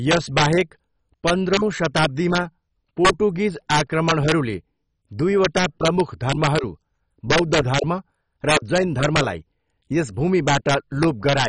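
Speech, dull and granular throughout, with a gurgling, flickering quality and nothing above about 10.2 kHz, which fits heavy MP2 compression at a low rate, likely around 32 kbps, where too few bits force upper sub-bands off and coarsely quantise the rest. Integer overflow produces violent cracks where loud peaks exceed the limit by about 2 to 8 dB and wrap to the opposite sign instead of clipping: 0.11–0.61 s, 1.28–2.38 s, 3.05–3.10 s, 3.71–4.32 s, 5.45–6.59 s, 7.31–7.79 s, 8.49–9.21 s and 10.48–11.45 s.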